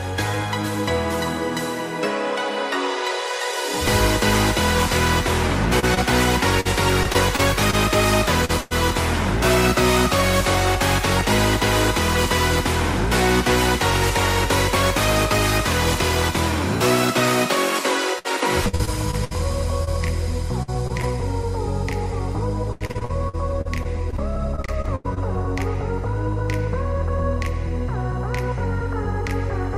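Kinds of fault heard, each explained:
Repeated packet loss (robotic sound): Short pieces of audio keep going missing, and each hole is filled by extending the sound just before it. This happens at 5.8–8.7 s, 18.2–21.0 s and 22.7–25.2 s. Gaps reach nearly 0.1 s. The last stretch is densest and most choppy.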